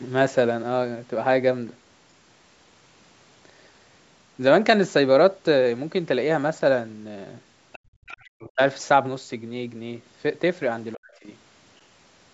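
A faint second voice breaks into this speech recording in two short scraps, from 7.72 to 7.79 s and again from 8.06 to 8.17 s, sitting roughly 20 to 25 dB below the main talker. This is likely the other side's voice leaking through: the far end was playing on a loudspeaker and the echo canceller failed to strip it fully from the microphone. Right after the first scrap, from 7.79 to 7.89 s, the room background sinks by about 31 dB and then comes back. This is background gated by the echo canceller, which clamped the microphone hard while the loudspeaker was active. The talker's own voice then drops away, by around 40 dB at its deepest, from 8.17 to 8.6 s and again from 10.95 to 11.34 s. The likely cause is speech suppressed in double talk: both sides spoke at once, and the canceller, unable to tell its own talker from the echo, turned everything down. The call's microphone processing limits the band to nothing above 8 kHz.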